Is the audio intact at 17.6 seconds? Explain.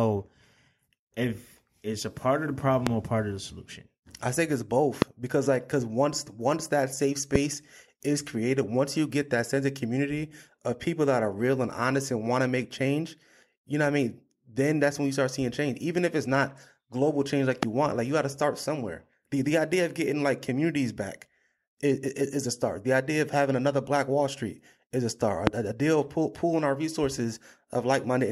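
No. From 17.63 to 17.65 s a single loud pop, likely from a plug, switch or static discharge, adds a sharp pulse peaking roughly 20 dB above the speech, which continues underneath. The waveform shows a tall narrow spike; the spectrogram, a bright full-band vertical line.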